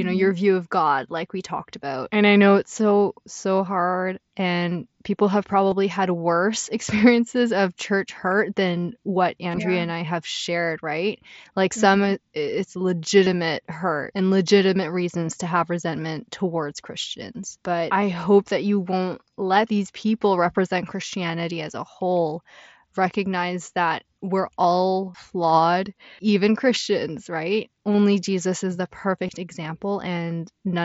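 Speech recorded over a Bluetooth headset link, carried by the mSBC wideband headset codec with its speech band up to 8 kHz, shows concealed Bluetooth headset packet loss at 5.71 s (between "hard and people have" and "had worse"), 9.51 to 9.58 s (after "church hurt than what", before "yeah and i have"), 13.25 s, 27.93 s and 29.27 s (after "is the"). Each brief gap, about 15 ms, fits two lost 7.5 ms frames. The 9.5 s event scatters about 37.5 ms of loss over 60 ms, with a longest run near 22.5 ms, giving a buzzy hold and a slight warble as real audio resumes. Unlike plain dropouts, these holes are filled with a repeat of the preceding waveform rather than silence or a click, so they come across as smudges instead of cuts.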